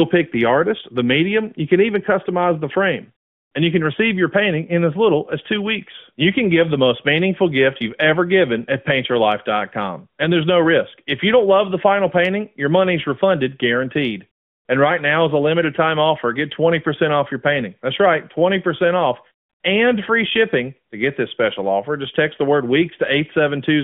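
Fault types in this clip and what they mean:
No technical faults can be heard in this recording.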